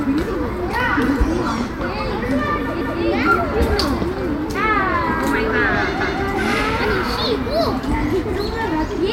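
At 2.81 s and again at 6.01 s the sound stutters: a click, then about 200 ms of audio plays a second time before moving on, ending near 3.01 s and 6.21 s. This is the overlapping chunks fault. The audio was handled in blocks roughly 3 s long, and each new block began 200 ms before the previous one finished, so the shared stretch is heard twice at each join.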